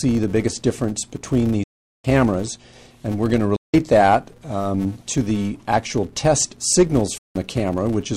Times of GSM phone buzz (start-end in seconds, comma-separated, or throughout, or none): none